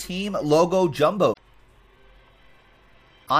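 Damaged data in a compressed stream appears at 1.29–1.39 s and again at 3.23–3.31 s, each a brief blip under a tenth of a second. Corrupted bytes there make the decoder misread its frames, lose sync and hunt for the next valid frame header.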